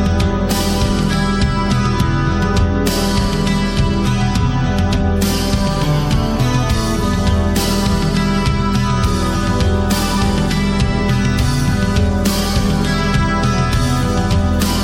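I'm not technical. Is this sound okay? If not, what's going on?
Yes, nothing wrong can be heard here.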